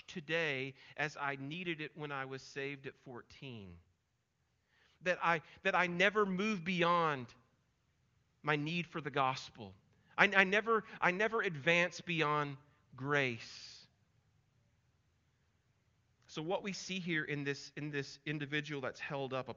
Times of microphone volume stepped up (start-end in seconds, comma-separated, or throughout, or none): 5.88